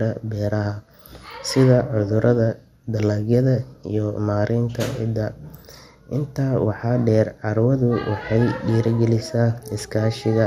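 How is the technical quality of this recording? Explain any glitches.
The quality is compromised by audible codec damage throughout the speech. Likely MP2 compression: starved upper bands are switched off, leaving nothing above 17.3 kHz. The sound is dull, gurgling and granular, fitting roughly 80 kbps.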